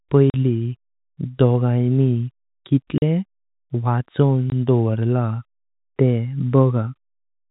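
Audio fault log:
0.30–0.34 s, 2.98–3.02 s, 4.50–4.52 s: packet loss filled with silence. The 40, 40 and 20 ms hard-edged gaps, which fit lost 20 ms packets, cut into the narrowband G.711 telephone sound.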